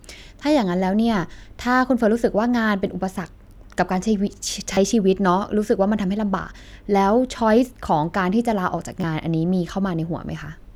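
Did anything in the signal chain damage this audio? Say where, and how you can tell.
Yes, a repeated buffer at 4.74 to 4.77 s and again at 9.01 to 9.04 s, at the driver or buffer stage. Each event is a brief buzzy stutter in the speech: a piece about 11 ms long plays three extra times in the first and twice in the second, with a hard join at each repeat, which fits a 512-sample buffer. New audio was late, so the device replayed its last buffer, and around 30 ms and 20 ms of speech were lost.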